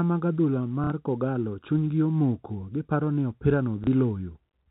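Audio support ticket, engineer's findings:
Packet loss with last packet repeated, 0.84–0.90 s, after "mag adhula", before "kogallo chuny gi omoko": 60 ms robotic stutter. Concealment replays the last received frame, which fits two lost 30 ms packets. Spectrogram: harmonic buzz near 33 Hz.

Same fault, 3.84–3.87 s, after "omoko giparo ni opira": 30 ms repeat, about one packet. Waveform: duplicated segment. Speech is band-limited below 4 kHz by the G.711 path.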